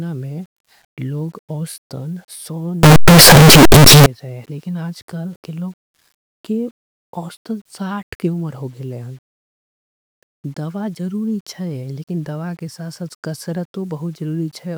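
From 2.83 s to 4.06 s, just before "थे लेकिन", the speech turns into a loud, harsh distortion in which quiet stretches come through as loud as the peaks. The likely cause is signed and unsigned mixed up in the 8-bit samples, flipping the top bit.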